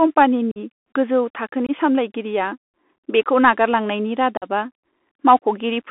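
From the start, the speech runs through a Bluetooth CVSD headset codec, with clearly audible damage. The band sits at roughly 250 Hz to 3.5 kHz, which fits a 64 kbps CVSD link coding one up-or-down bit per sample. The adaptive step can't keep pace with fast, loud high-frequency movement, so sibilants turn scratchy, peaks distort, and a granular hiss sits under the speech throughout.

Unconcealed Bluetooth headset packet loss then cuts three abrupt holes. The first, from 0.51 to 0.58 s, drops about 45 ms of audio, consistent with around seven short packets lost. The second, from 1.67 to 1.71 s, removes about 22.5 ms, roughly three packets. The third, from 4.37 to 4.44 s, right after "बेखौ नागारलांनायनि", again loses about 45 ms. Nothing fills these gaps, so they sound like hard-edged dropouts.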